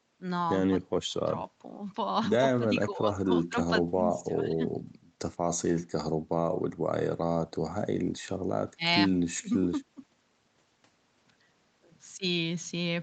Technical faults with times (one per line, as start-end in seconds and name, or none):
none